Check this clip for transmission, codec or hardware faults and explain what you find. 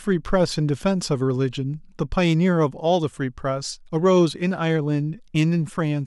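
Nothing faulty can be heard anywhere in this recording.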